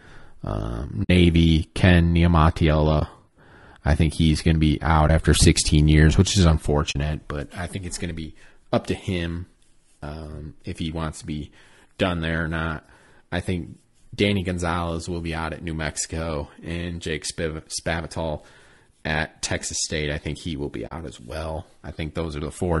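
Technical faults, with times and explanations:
Throughout: low-delay AAC compression. The speech sounds rough and grainy, with noise between the harmonics and a thin, synthetic-sounding top band. This is likely AAC-ELD at a low bitrate such as 32 kbps, whose short frames resolve voice pitch harmonics poorly and leave too few bits for the upper band.
1.03–1.10, 2.99–3.02, 5.07–5.10, 6.91–6.96, 19.04–19.07 and 20.87–20.92 s: AAC frame loss with muting. The gaps last about 20 to 60 ms, the first being the longest. The decoder zeroes the missing spectrum, and the overlapping windows fade the sound out and back in, leaving soft-edged holes.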